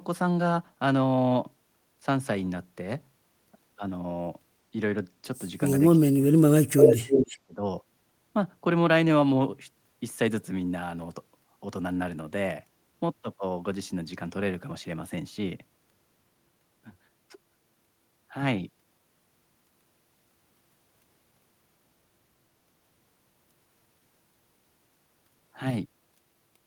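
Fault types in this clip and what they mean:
Speech suppressed in double talk: With both sides talking at once, an echo canceller likely could not separate the local talker from loudspeaker echo and turned everything down. The speech drops between 5.95 and 7.61 s, falling by roughly 35 dB at its deepest.
Echo leak: An echo canceller at the loudspeaker end likely failed to remove what its microphone picked up, so a copy was sent back. From 6.76 to 7.35 s, a repeat trails the speech by 301 ms, roughly 5 dB louder than the speech.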